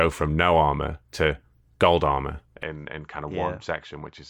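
From 2.63 s, just after "armor to gold armor", the speech abruptly narrows and drops roughly 10 dB, with nothing above 7.6 kHz and a faint new noise floor. This is likely an input switched to a poorer device. The spectrogram shows the top band cut off, and the waveform visibly shrinks.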